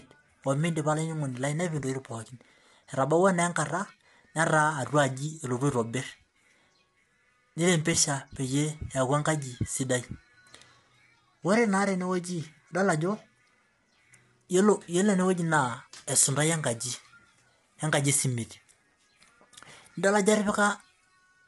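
From start to finish, the speech sounds rough and grainy, with noise filling the gaps between harmonics. Nothing is heard above 11.7 kHz. The likely cause is low-delay AAC compression, whose short frames blur pitch detail. The damage suggests a bitrate around 32 kbps.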